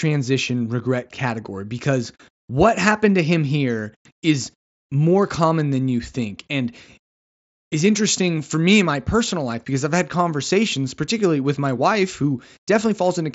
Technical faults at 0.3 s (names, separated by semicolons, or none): none